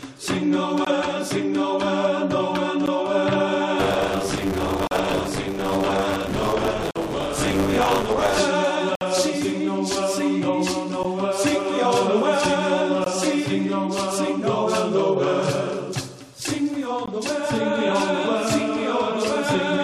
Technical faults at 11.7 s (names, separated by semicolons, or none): none